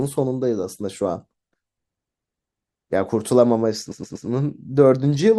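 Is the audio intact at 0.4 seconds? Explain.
Yes, at 0.4 seconds the speech plays through cleanly, with no dropout, click, distortion or other fault at that moment.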